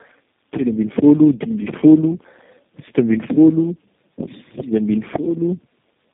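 Tandem speech coding runs through the whole clip: the speech sounds as if it passed through about three low-rate speech coders in a row, each re-coding the last one's damage. It comes out rough, muffled and warbly, with nothing above 3.6 kHz.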